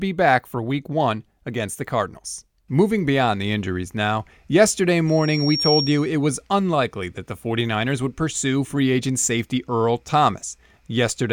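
After "the injuries now yesterday", a loudspeaker feedback squeal runs from 5.07 to 6.11 s. The mic-to-speaker loop rings at 5.6 kHz, swelling over roughly 0.7 s to a few dB above the speech.

From 6.72 to 10.82 s, periodic USB or driver dropouts skip tiny slivers of audio every 1.02 s, giving about five evenly spaced ticks.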